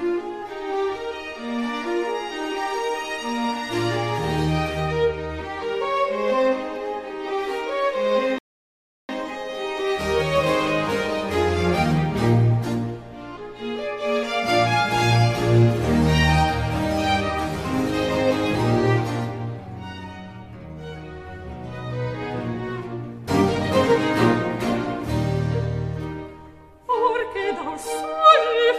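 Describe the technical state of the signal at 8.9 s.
At 8.9 s the signal sits inside a rebuffering stall running from 8.38 s to 9.09 s: playback drained its store of downloaded audio and had to halt until fresh data came in. What you hear is an abrupt cut to silence lasting about 0.71 s, after which the sound picks up precisely where it broke off. No material goes missing; the interruption simply stretches the timeline by that 0.71 s gap.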